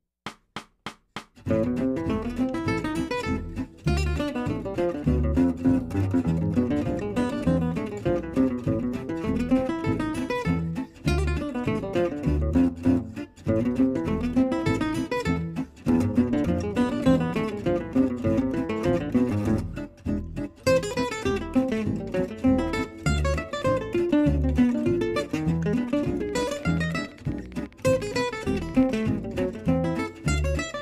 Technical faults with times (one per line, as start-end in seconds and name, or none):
26.29-29.04 train of clicks